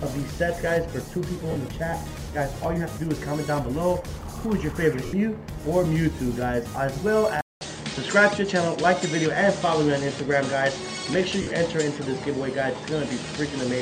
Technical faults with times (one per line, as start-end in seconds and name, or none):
1.51-1.56 lost LE Audio frames
5.06-5.13 lost LE Audio frames
7.41-13.82 input switched to a poorer device
11.42-11.47 lost LE Audio frames